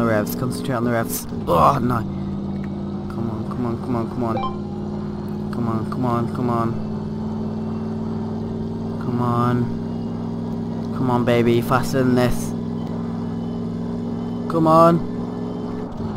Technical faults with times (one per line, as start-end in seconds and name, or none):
none